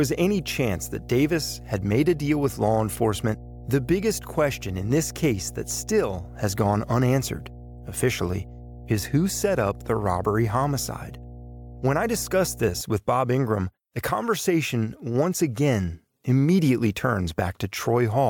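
From the start to 12.8 s, mains hum sits under the speech. It is a steady 60 Hz tone with low harmonics, roughly 15 dB below the voice. Power-line current leaked into the signal, probably through a ground loop or nearby transformer.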